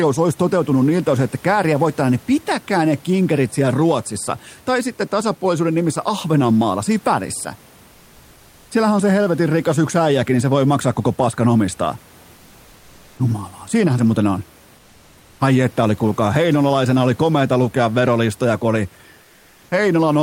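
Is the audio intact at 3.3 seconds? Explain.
Yes, the speech is intact at 3.3 seconds, with only the room's own background noise sitting about 30 dB below it.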